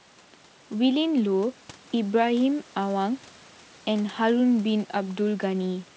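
No faults: the speech is band-limited to 8 kHz as expected of a wideband call path, which fits G.722 at 64 kbps, and the room noise sits about 31 dB below it.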